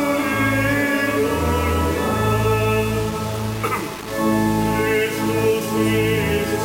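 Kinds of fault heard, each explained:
Low bit depth without dither: Gritty, grainy distortion tracks the sound throughout, only about 15 dB below it. Likely rounding to 4 bits without dither.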